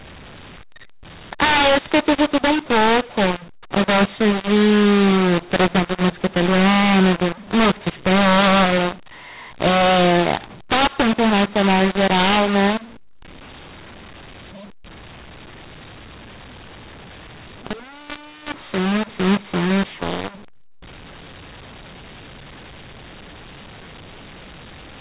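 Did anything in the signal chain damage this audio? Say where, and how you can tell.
Yes. The fault is mu-law and A-law mixed up, running throughout. At the codec stage, G.711 mu-law audio was decoded with the A-law curve. The mismatched companding scrambles sample levels, so the speech sounds harsh and distorted, and pauses fill with noise instead of silence.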